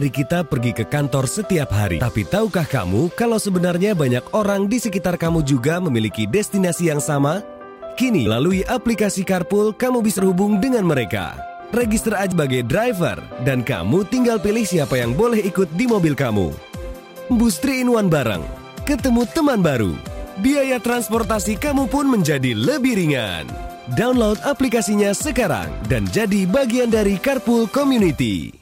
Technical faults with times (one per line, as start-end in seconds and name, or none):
1.98 compressed frames skipped
8.25 compressed frames skipped
10.17 compressed frames skipped
12.31 compressed frames skipped
17.30 compressed frames skipped